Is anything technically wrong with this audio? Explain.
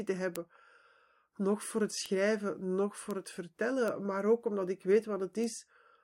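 Yes. Bit error spikes occur at 0.36, 2.06 (just after "nog voor het"), 3.11, 3.88 (just before "maar ook omdat ik") and 5.44 s. A single flipped bit in one or two samples throws the value off by a power of two. Each is a sharp, broadband tick, peaking at about -11 to -23 dBFS, unrelated to the speech.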